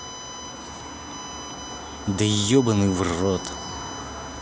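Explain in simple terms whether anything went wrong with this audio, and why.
Electrical noise from a USB connection leaked into the recording chain, a fault known as USB whine. The USB bus draws power in regular bursts a thousand times a second, and that rhythm crept in through the power or ground wiring. The result is a thin, steady, fixed-pitch whistle running under the speech for the whole clip. It is built on a 1000 Hz tone, is most prominent around 6 kHz, and sits fairly loud relative to the speech.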